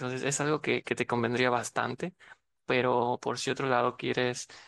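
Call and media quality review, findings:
No faults found in this speech recording. Nothing here needs a ticket.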